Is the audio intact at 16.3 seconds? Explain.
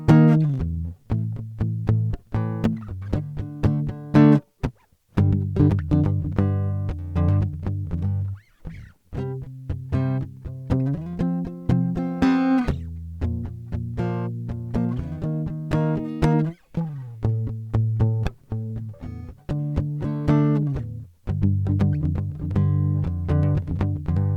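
Yes, the music plays through cleanly at 16.3 seconds, with no dropout, glitch or distortion at that moment.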